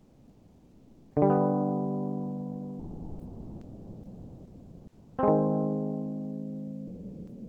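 A voice detector, likely one that mistook the music for background, stopped transmission, so the music is dropped and replaced by steady comfort noise from 0 to 1.15 s, 2.79 to 5.17 s and 6.87 s to the end; after the first two, the music returns when transmission resumes.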